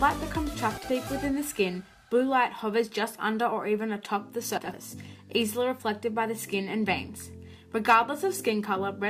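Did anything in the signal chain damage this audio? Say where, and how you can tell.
Yes, frames out of order, introduced on the network or in the receive path before decoding. Around 0.77 to 0.90 s, and again from 4.57 to 4.74 s, two neighbouring blocks of frames were decoded in swapped order, so each stretch plays its halves exchanged. The swapped blocks are 60 ms and 80 ms long, which fits three and four 20 ms frames. Each spot is a garbled flutter, and no time is lost.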